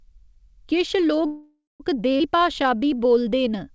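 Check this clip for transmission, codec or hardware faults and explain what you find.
Three transmission faults are audible in this speech clip, all typical of a real-time call, heard through a band that stops at 8 kHz, as G.722 does.

Call audio freeze, 1.26 to 1.82 s: the last sound is drawn out as a fading buzz or hiss into about 180 ms of silence, then speech resumes where it stopped. The likely cause is delayed packets draining the jitter buffer. A spectrogram shows smeared, decaying bands, then a blank gap.

Skip ahead, 2.18 to 2.22 s: roughly a fifth of a second of speech is missing, joined across a 19 ms seam. Audio dropped in transit or by an overflowing buffer lets playback jump forward. The waveform shows an abrupt join with no pause.

Jitter buffer slow-down, 2.36 to 3.71 s: speech runs at 88% speed with unchanged pitch. Repeated pitch periods add 168 ms to rebuild the buffer, stretching sounds. 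Spectrogram harmonics look horizontally stretched, with repeating cycles in the waveform.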